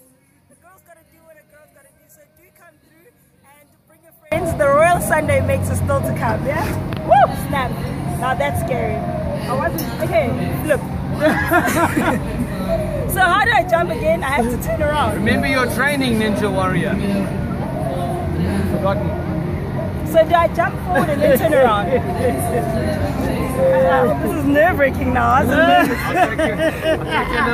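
From the start to 4.32 s the sound collapses by about 33 dB and turns faint, the centre all but gone. This is one channel inverted, likely: reversed polarity on one side cancels the shared content when summed to mono.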